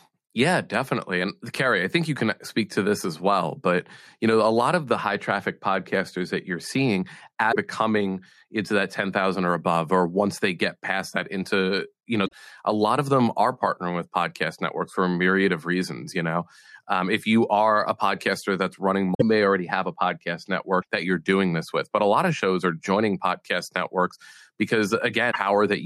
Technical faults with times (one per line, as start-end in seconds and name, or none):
7.51-7.56 damaged data in a compressed stream
12.24-12.33 damaged data in a compressed stream
19.11-19.22 damaged data in a compressed stream
20.78-20.85 damaged data in a compressed stream
25.30-25.36 damaged data in a compressed stream